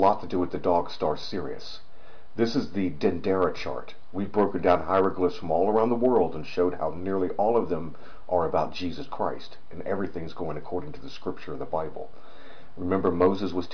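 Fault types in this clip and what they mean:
No faults detected; nothing in the signal path calls for a note.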